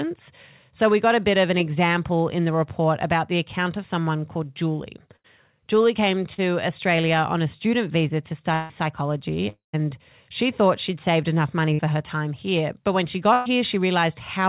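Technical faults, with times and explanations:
5.16–5.26 s, 11.73–11.86 s and 13.33–13.48 s, burst of packet loss: Each time a short run of packets goes missing and the receiver keeps the last sound going while turning it down. You hear a held buzz or fading hiss for about 80 ms, 55 ms and 120 ms, and then the audio picks up further along with that stretch gone. The middle one also gets stretched by a few milliseconds as it blends back in.
6.34–6.40 s, short concealed packet loss: About 40 ms never made it to the decoder in time, so the receiver patched the hole by extending the last sound and then crossfading back into the real audio. It's over quickly and comes across as a little smear or wobble rather than a clear gap. Everything has gone through the G.711 A-law call path, with nothing above 4 kHz.
8.54–8.71 s and 9.49–9.75 s, long network dropout: These stretches sound like the audio is being stretched out and then fading away, which likely means nothing arrived from the network for a while. 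On the first one, the continuation covers about 150 ms and never actually reaches silence. The second one runs about 240 ms: the buzz or hiss fades out, the last 0.12 s or so is dead silence, and then the audio comes back without the part that was lost.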